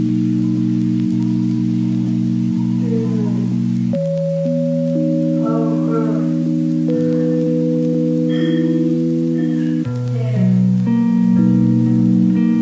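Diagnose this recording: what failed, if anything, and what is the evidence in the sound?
Playback stage: the clip runs at the wrong sample rate, clocked out at two-thirds of its intended speed with no conversion, which fits 24 kHz material played at 16 kHz. From start to finish the sound is slowed to 0.667 times and lowered by about 7 semitones.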